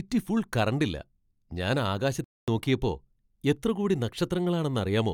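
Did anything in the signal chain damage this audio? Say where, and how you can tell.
Yes. At the playback stage, a playback stall cuts the speech off mid-flow from 2.24 to 2.48 s, a silence of about 236 ms, and the speech then resumes. The likely cause is the player starving for data or its thread blocking. A dropout would usually be shorter, and a network gap would usually skip content rather than sitting in clean silence.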